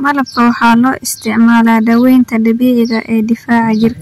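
Hard clipping runs through the whole speech clip: the level is driven about 9 dB past what the chain can pass, so a few percent of samples hit the ceiling. On the waveform, peaks appear sliced flat. The spectrogram shows smeared high-frequency harmonics, heard as crackly harshness on loud syllables.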